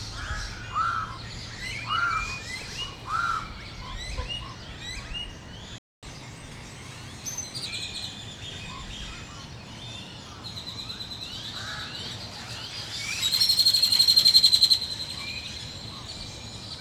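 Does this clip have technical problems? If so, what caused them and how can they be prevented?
Yes. The player most likely ran short of data, or had its audio thread blocked, at 5.78 s, so it had nothing to send to the output until 6.03 s. That playback stall leaves a gap of about 245 ms in which the sound simply stops in mid-flow before resuming. A larger playback buffer, and keeping decoding and file or network work off the audio thread, would prevent the dropout.

To recover the lost time, the player then resampled its backlog and played it 1.15 times faster from 6.03 s to 7.66 s. This catch-up at higher speed makes everything run noticeably quicker and raises the pitch by about two semitones for roughly 1.6 s, after which speed and pitch drop back to normal. Letting a live stream skip ahead, or spreading the catch-up over a much smaller rate change, would avoid the audible speed-up.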